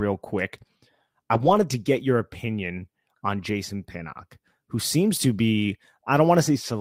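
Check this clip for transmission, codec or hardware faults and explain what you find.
One transmission fault is audible in the speech, a lost packet rebuilt from error correction, between 1.33 and 1.63 s, just before "to get your opinion". About 160 ms of audio was lost and replaced by the low-bitrate backup copy each following packet carried, which fits 8 separate 20 ms packets. Playback never drops out, but those frames sound rougher and noisier. On a spectrogram the harmonics blur into a grainier, noisier texture. The waveform stays continuous with no flat gap.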